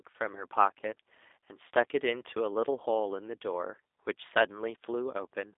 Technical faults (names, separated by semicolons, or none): G.729 codec